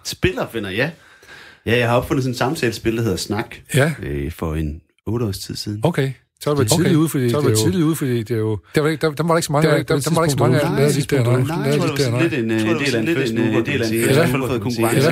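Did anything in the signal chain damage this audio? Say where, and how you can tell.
Yes: a doubled audio track runs from 6.59 s to the end of the clip. At that point a second full-band copy of the speech cuts in abruptly, trailing the original by roughly one second at roughly the same level. It carries no decay or added room colour, so it is not an acoustic echo. The likely cause is the audio being captured a second time through a slower path in the capture or buffering stage, with both copies mixed out of step.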